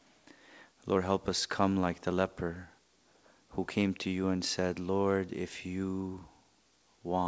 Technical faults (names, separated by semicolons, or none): none